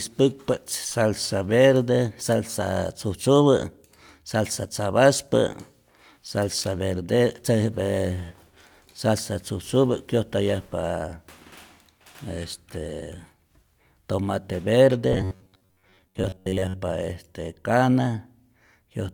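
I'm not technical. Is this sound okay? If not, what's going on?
No. From about 15.13 to 16.75 s the speech turns into a stiff, metallic buzz with a steady low pitch of about 94 Hz. This is the robotic sound from repeated short buffers. The likely cause is new audio arriving too slowly, so the player keeps replaying its last tiny slice, roughly 11 ms long, through most of that stretch. Unlike a dropout, the sound never goes silent, and it still loosely tracks the speech.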